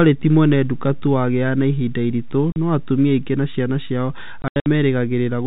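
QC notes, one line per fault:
2.52–2.56 s, packet loss filled with silence: a 40 ms hole cuts the speech outright, with hard edges at both ends. The gap length fits two consecutive 20 ms packets going missing, with the receiver playing silence in their place instead of concealing the loss.
4.42–4.66 s, packet loss filled with silence: a denser burst where 160 ms of audio drops out in pieces spread over 240 ms, the longest unbroken gap being 80 ms. Each hole starts and stops abruptly, so the passage sounds chopped, the gaps again stepping in multiples of the same 20 ms packet length.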